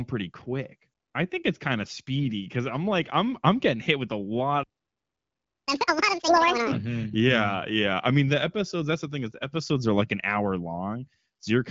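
Playback stall, from 4.63 to 5.68 s: the speech cuts off mid-flow and the output sits silent for about 1.04 s. The likely cause is the player running short of buffered data or having its audio thread blocked, so nothing reached the output until it recovered.

Catch-up at higher speed, from 5.68 to 6.72 s: once the speech resumes, it runs at twice normal speed with the pitch raised by roughly ten semitones. The player is resampling its backlog to win back all of the lost second, then drops back to normal rate.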